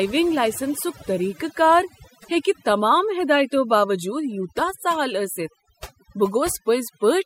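Throughout the speech, overdone noise removal leaves gaps between phrases near silent but sprinkled with twinkling specks, while soft consonants and breathy tails vanish. Unlike a low-bitrate codec, the damage follows the noise floor, not the loudest passages.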